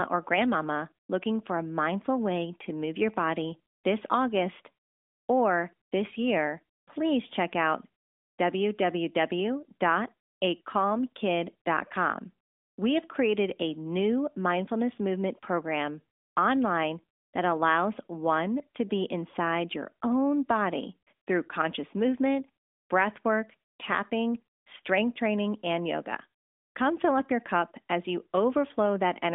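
No technical faults occur anywhere in this recording.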